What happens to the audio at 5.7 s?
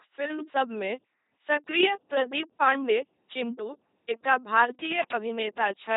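At 5.7 s the LPC-10 vocoder damage heard across the whole clip continues: the speech is rebuilt from pulse or noise excitation through a short all-pole filter, giving heavy, buzzy robotic speech with nothing above 3.8 kHz, which fits a 2.4 kbit/s coder.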